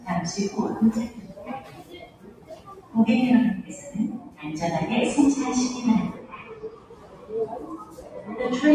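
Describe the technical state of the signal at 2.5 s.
At 2.5 s the sound sits inside a stretch of sound cut by the noise suppressor, running from 1.6 to 2.94 s. The suppressor treats this sound as noise and pulls it down by as much as about 10 dB, so sustained parts sink and decays are cut short. On a waveform the envelope visibly caves in across that span, while on a spectrogram the steady bands fade out and leave only brief onsets.

Beneath that lies a noise suppressor applied to sounds across the whole clip. Because it was tuned for speech, it keeps mistaking steady tones and ambience for noise and swings its gain by roughly 15 dB. The result pumps and thins. A spectrogram shows the background flickering on and off, and the waveform shows uneven, breathing level changes.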